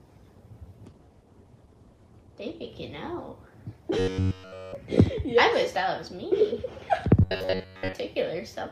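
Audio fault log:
0.88–2.75 s, call bitrate drop: the encoder's rate falls from 96 to 15 kbps, bottoming out for about 1.8 s. Coarser coding roughens the sound, and the audio bandwidth shrinks from 20 kHz to 12 kHz, dulling the top end until the rate recovers.
3.99–4.75 s and 7.21–7.95 s, robotic sound from repeated short buffers: a rigid metallic buzz at 93.8 Hz, likely from the same short chunk being replayed while fresh audio is late, which fits a buffer of roughly 10.7 ms. All of the first stretch is repeated, and most of the second.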